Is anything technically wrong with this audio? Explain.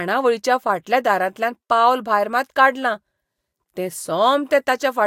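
No, nothing technically wrong can be heard here.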